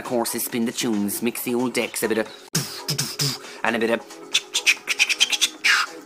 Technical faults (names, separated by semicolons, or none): damaged data in a compressed stream